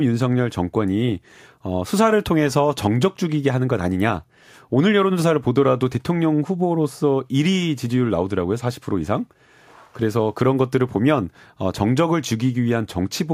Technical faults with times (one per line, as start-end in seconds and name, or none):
none